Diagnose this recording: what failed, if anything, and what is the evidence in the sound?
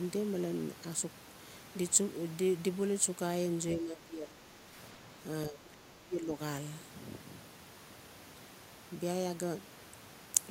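Call processing failed. The speech level drops sharply twice. From 3.77 to 4.72 s it sinks by around 15 dB. From 5.49 to 6.39 s it falls further, by around 25 dB. The dips last most of their spans, roughly 0.7 s and 1 s. The likely cause is speech suppressed in double talk. An echo canceller heard both ends at once, could not separate the near talker from loudspeaker echo, and attenuated everything.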